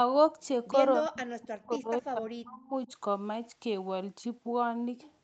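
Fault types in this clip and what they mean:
Speech suppressed in double talk: from 1.01 to 2.91 s the speech dips and breaks up in pieces, about a second and a half in all, falling by as much as roughly 40 dB. The likely cause is an echo canceller muting the near talker during crosstalk. Unlike packet loss, the gaps follow the other side's talking.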